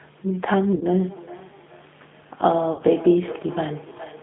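A speech recording carried over the G.729 codec at 8 kbit/s, which confines the line to roughly 150 Hz to 3.6 kHz and rebuilds the voice from a filter and sparse pulses, leaving it plainly rough and synthetic. VoIP packet loss concealed by the speech codec occurs twice, from 0.76 to 0.83 s and from 2.73 to 2.82 s. About 50 ms and 60 ms of audio go missing, and the decoder smears the last sound into a fading buzzy or noisy tail. From 1.06 s to the end, feedback echo between two devices brings each phrase back about 0.4 s later, thinner and ringing, at about 16 dB below the speech.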